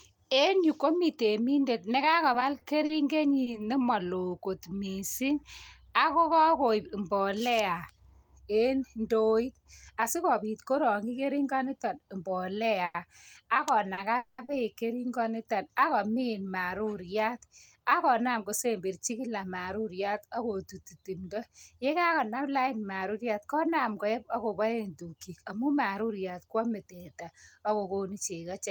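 Between 2.33 and 3.55 s, after "yu komi temindet" and before "nemaloo kot mising", packets arrive late and the jitter buffer keeps running dry. The result is repeated stalls (stutter): six short gaps, the longest 40 ms, about 120 ms in all, each bridged by stretching the last sound, so the speech drags and hiccups. The same happens from 12.85 to 14.50 s, with three longer stalls totalling 170 ms, the longest 90 ms.

Inside that stretch, from 14.17 to 14.40 s, comes a call audio freeze: 210 ms of the last sound held and fading without dropping to silence, then the speech resumes where it stopped, now 210 ms later. A longer hold-up of packets is the likely cause.

Later the buffer holds more audio than it should, and the receiver trims short pitch-period slices to catch up. This jitter buffer speed-up runs from 18.04 to 19.62 s, after "ak komin maruriat ak", at 106% speed, removing roughly a tenth of a second. 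It recurs from 25.01 to 26.89 s, after "maruriat konam koep agoboen" and before "teta ak", at 107%, removing roughly 150 ms. Pitch stays the same, but the speech sounds rushed.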